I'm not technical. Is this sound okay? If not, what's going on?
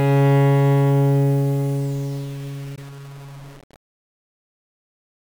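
No. A grainy, gritty roughness follows the sound throughout, most noticeable in quiet parts. It is likely low bit depth without dither, about 6 bits. At 2.76 to 2.79 s a brief silent gap appears, likely a Bluetooth dropout where one lost packet of audio went missing.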